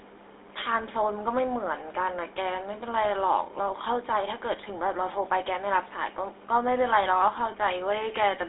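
GSM full-rate codec damage runs through the whole speech clip. The codec models the vocal tract and drives it with sparse, regularly spaced excitation pulses, which fits a 13 kbit/s coder, so speech turns plainly buzzy and gravelly, squeezed into a 300 Hz to 3.7 kHz band.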